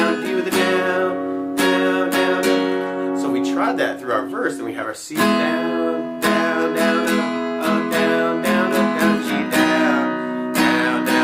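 No technical faults can be heard in this audio. At no point along its timeline does anything stand out as having gone wrong.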